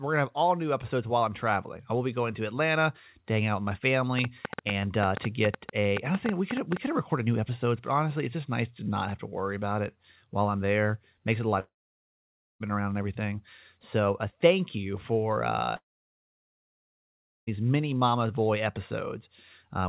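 From 4.19 to 6.78 s, between "hang out with my" and "could have recorded new", a train of clicks ticks over the speech at an irregular pace of about 7.4 per second, roughly twenty in all, peaking about 15 dB above the speech. They are likely from interference or a faulty connection or power supply. On a waveform they appear as thin, similar spikes, and on a spectrogram as narrow vertical streaks.

At 11.6 s, after "it a", what is likely a long network dropout removes 1.0 s of audio. The receiver briefly carries the last sound forward as a fading buzz, leaving 0.9 s of near-silence, and speech resumes at 12.62 s with "around and everything". A second, likely network-caused dropout follows "uh thank you for" at 15.76 s: 1.72 s is lost, 1.66 s of it near-silent, until 17.49 s. Both show as a flattened waveform and an empty spectrogram column after a short fading smear. Across the clip the spectrogram stays empty above 4 kHz, consistent with a G.711 mu-law call path.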